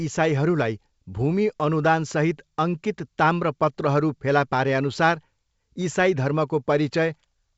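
No faults to report; the speech comes through G.722 wideband coding at 64 kbit/s, with the band reaching to about 7 kHz and any coding hiss in the upper band faint at most.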